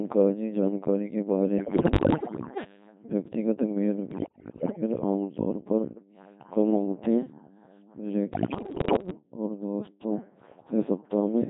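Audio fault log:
Throughout: Codec 2 vocoder. The speech is rebuilt from pitch, voicing, level and spectral shape, then synthesised from sine waves. None of the original waveform survives. The voice sounds robotic and buzzy, with heavy damage that points to the 2.4 kbit/s mode.
1.58–2.64 s, 4.12–4.82 s and 8.34–9.10 s: bit errors on digital voice radio. The first burst follows "jankari ke". Flipped bits corrupt whole vocoder frames, so pitch, level and tone jump wildly into warbles and bleeps. Roughly one bit in ten is wrong in the first burst, and more in the later two.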